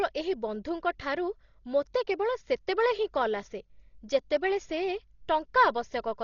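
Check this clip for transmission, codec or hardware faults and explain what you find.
One codec fault runs through the whole speech clip, likely Dolby Digital compression at a bitrate that points to about 32 kbps: starved mantissas leave heavy damage, nothing above 7 kHz, and a dull, fluttering noise.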